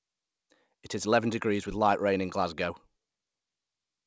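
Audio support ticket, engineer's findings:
No faults found in this speech clip. It has the band limit of a call path, with nothing above 8 kHz, which fits a wideband codec such as G.722 at 64 kbps.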